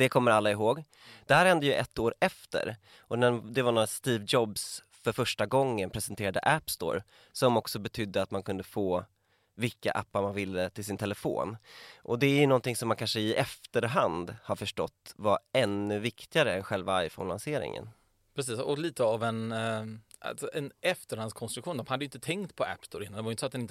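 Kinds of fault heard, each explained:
No technical faults detected in the speech; nothing to report.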